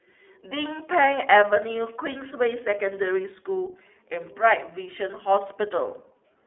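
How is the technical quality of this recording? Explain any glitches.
The technical quality is limited by one fault present throughout the speech. iLBC codec, whole clip: each frame is coded independently and the band is cut to roughly 250 Hz to 3.5 kHz. This fits 13.33 kbps with 30 ms frames and leaves the speech plainly rough, thin and synthetic.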